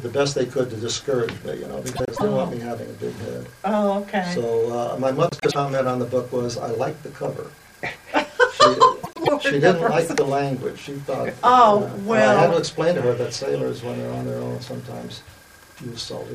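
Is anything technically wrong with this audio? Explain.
Yes, there are three short frames out of order glitches, at 1.96–2.21 s, 5.29–5.56 s and 9.03–9.29 s. In each, two roughly 0.1 s blocks play swapped, causing a garbled flutter.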